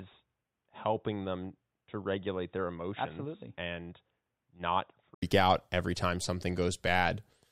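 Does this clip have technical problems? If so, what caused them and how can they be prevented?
Yes. From 0.0 to 5.22 s the speech is dull and boxy, with nothing above 3.8 kHz, a level about 5 dB lower, and a faint added noise floor well below the voice. An 80 ms silence then precedes "out every time", after which the full bandwidth returns. This is likely an input switched to a poorer device, such as a headset's narrowband call profile, before recording returned to the normal microphone. Locking the input device and disabling automatic switching prevents it.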